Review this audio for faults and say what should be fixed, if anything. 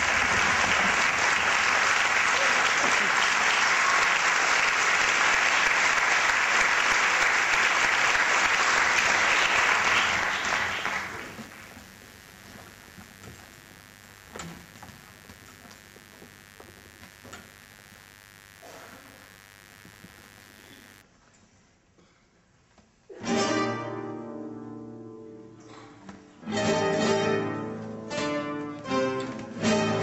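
Mains buzz runs from 0.0 to 21.02 s. Sharp switching spikes from a dimmer, a rectifier or an unshielded cable got into the signal path twice in every cycle of the 50 Hz supply. These spikes fill the spectrum with a dense stack of 50 Hz harmonics reaching up to several kilohertz. The result is a steady, raspy buzz sitting roughly 25 dB below the wanted audio, and it stops at 21.02 s. To prevent it, use shielded cables routed away from dimmers and power supplies, and run the recording chain from a clean, properly grounded circuit.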